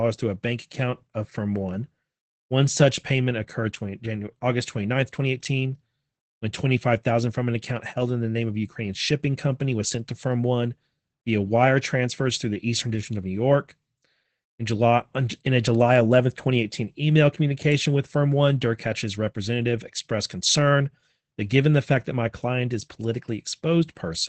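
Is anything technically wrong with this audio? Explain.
Yes, there's Opus voice compression damage all the way through the speech. Nothing comes through above 8 kHz, and the coarsely coded excitation of the SILK predictive coder leaves the voice muffled, a bit hoarse and faintly robotic, which fits a low rate of around 12 kbps.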